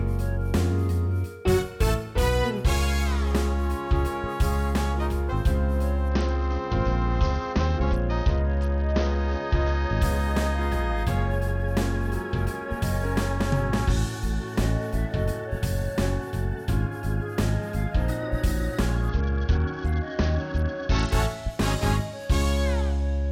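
A Bluetooth SBC bit pool drop dulls the treble and adds gritty noise from 6.09 to 10.02 s and from 19.09 to 21.12 s. This fits the link falling from bit pool 28 to 8, near 72 kbps.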